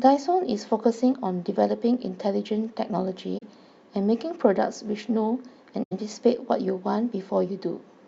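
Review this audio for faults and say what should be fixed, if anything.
AAC frame loss with muting at 3.38–3.43 s and 5.83–5.93 s: missing frames are zeroed and the window overlap fades them into soft gaps. The gap lengths fit two and four lost frames. Prevent this with retransmission or forward error correction on the transport, and use decoder concealment rather than muting.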